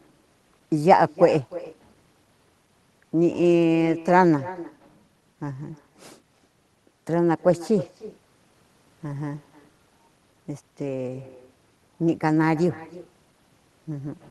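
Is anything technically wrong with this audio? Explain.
Yes. Throughout the speech there is echo with no canceller: the far end's loudspeaker feeds its microphone and nothing subtracts it, so each phrase returns about a third of a second later, about 16 dB quieter and thinner. Unlike room reverberation, it is a distinct delayed repeat rather than a smooth tail.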